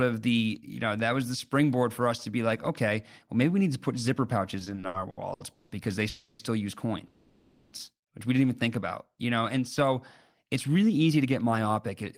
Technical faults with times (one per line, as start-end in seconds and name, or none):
4.59-5.72 repeated stalls (stutter)
6.09-6.42 call audio freeze
7.07-7.75 call audio freeze
10.43-12.04 jitter buffer speed-up